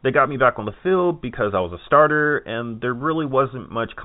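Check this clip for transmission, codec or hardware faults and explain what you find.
No transmission, codec or hardware faults show up in the clip, which carries the band-limited sound of ordinary G.711 A-law telephone coding.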